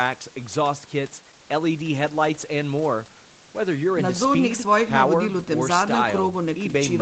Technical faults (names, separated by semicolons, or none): none